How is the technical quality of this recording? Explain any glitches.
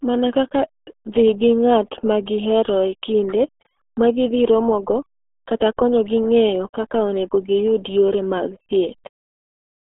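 Pretty rough, honestly. The whole clip is squeezed through what sounds like the RealAudio 14.4 codec, and it never lets up. The speech sits in a narrow phone-style band of roughly 300 Hz to 3.4 kHz, with nothing at all above 3.8 kHz. The damage is heavy: muffled, gargly speech. That's what happens when a speech coder rebuilds the voice from very few parameters, which fits the 8 kbit/s rate RealAudio 1 used for dial-up.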